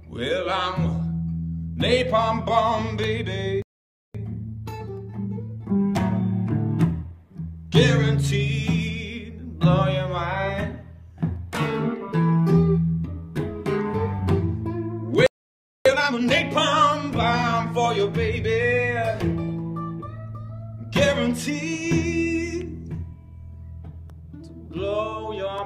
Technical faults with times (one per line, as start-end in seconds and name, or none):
3.62-4.15 playback stall
4.15-7.15 time-compressed catch-up
15.26-15.86 playback stall
15.86-16.44 time-compressed catch-up